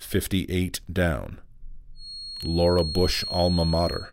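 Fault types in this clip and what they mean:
Feedback whistle, from 1.93 s to the end of the clip: a thin, steady tone at 4.3 kHz sits behind the sound, roughly 10 dB below it, swelling and fading slowly in level without growing. The likely cause is a loudspeaker-to-microphone loop held right at the edge of feedback, where the loop gain at that one frequency stays just short of taking off. The tone therefore keeps sounding rather than building into a howl.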